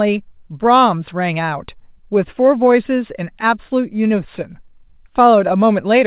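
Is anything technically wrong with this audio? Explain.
No, nothing is technically wrong with this speech; the call path runs as intended, with the G.711 mu-law coding at 64 kbps and nothing above 4 kHz, as that codec always delivers.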